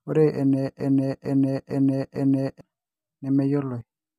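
From 0.80 to 2.61 s, a broken-record loop replays one 0.45 s fragment four times, likely a stalled stream; the spectrogram shows identical repeating blocks.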